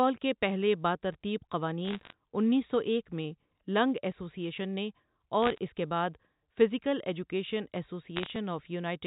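Bit errors on a digital phone line corrupt the G.711 mu-law stream in three short bursts, each flipped bit knocking a single sample off its value. From 1.85 to 2.13 s, after "کے پہلے باترتیب" and before "انیس سو", the error rate is under one percent and the crackle is densest. From 5.42 to 5.58 s, after "لنگ ایسوسی ایشن نے", sparser ticks appear, and after "کے بعد فزیکل ایجوکیشن" a final burst runs from 8.16 to 8.30 s, all as sharp clicks laid over the telephone-band speech.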